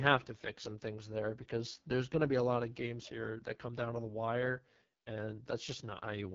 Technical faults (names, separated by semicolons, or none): AMR wideband (HD Voice) codec